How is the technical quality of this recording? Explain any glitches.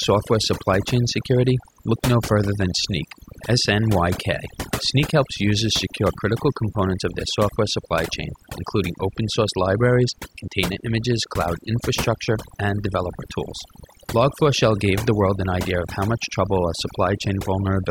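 Technical quality is let down by overdone noise removal, present from start to finish. A noise reduction stage set far too aggressively pulls individual frequency bands down or out whenever they sit close to its idea of the background noise, and softer parts of the speech get taken with them. Pauses drop to near silence sprinkled with twinkling specks. Unlike a noise gate, which shuts everything at once, this removes frequency bands unevenly.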